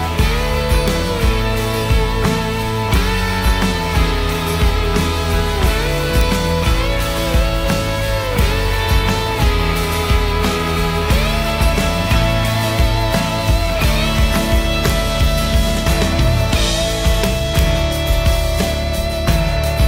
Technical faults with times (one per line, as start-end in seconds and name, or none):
0.88 integer overflow
2.94 integer overflow
6.21 integer overflow
8.39 integer overflow
14.90 integer overflow
17.24-17.59 integer overflow